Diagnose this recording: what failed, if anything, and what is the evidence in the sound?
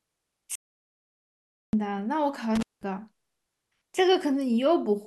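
From 0.55 s to 1.73 s the speech stops dead into silence, with no room tone, and about 1.18 s of audio is simply gone. This audio dropout to silence likely comes from the input device or its link dropping while the recorder kept writing silence.

At 2.55 s to 2.83 s the sound breaks off with crackle at both edges, and for roughly 190 ms only faint hiss remains. This is an intermittent contact in the analogue wiring: a loose plug or cable briefly opening the signal path.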